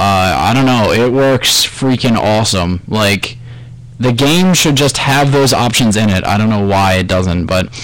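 Hard clipping runs through the whole clip. The sound reaches the converter or gain stage roughly 23 dB hotter than it can pass, so every peak is sheared flat, and around a third of the waveform was cut off at that stage's limit. Those flat tops generate dense high-order harmonics, heard as a constant harsh fuzz on all loud passages rather than occasional crackle. The overload is too deep for the lost peak shape to be recovered.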